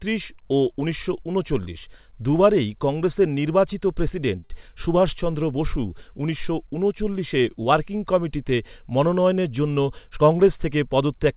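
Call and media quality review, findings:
Short stall from a late packet, twice: 4.40–4.44 s, then 4.44–4.52 s. Jitter buffer ran dry; last sound held about 24 ms, then 52 ms. Nothing lost, just a brief drawn-out hold. Band stops at 4 kHz, consistent with G.711 A-law at 64 kbps.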